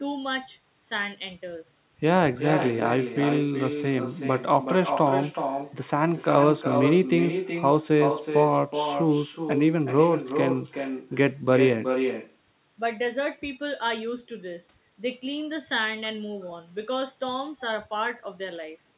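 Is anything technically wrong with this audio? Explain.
Yes. Throughout the clip, there is an echo with no canceller: the far end's loudspeaker feeds its microphone and nothing removes it, so every phrase of speech returns roughly 0.4 s later, about 7 dB quieter, as a thin, telephone-band copy limited to 4 kHz by the G.711-style call path.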